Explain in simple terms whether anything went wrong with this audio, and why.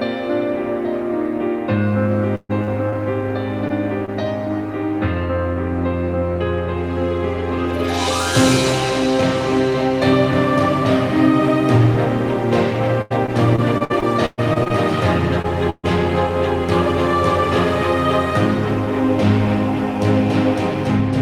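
Two bursts of packet loss hit the connection, at 2.35 to 2.51 s and again at 15.70 to 15.85 s, each dropping about 140 ms of audio. The receiver stretched the last sound to cover the hole, letting it fade to 30 ms of silence before the sound picks up further along.

Short concealed packet loss occurred at 2.63, 2.90, 3.68, 4.05 and 15.42 s, with 20 to 40 ms going missing each time. The receiver patched each tiny hole with a copy of the preceding sound, so each one comes across as a quick smear or wobble.

Repeated packet loss (robotic sound) ran from 13.02 to 14.72 s. Ten separate gaps, the longest 120 ms, removed about 0.4 s in all, nearly a quarter of that stretch. Constant patching leaves the sound choppy, with bits missing.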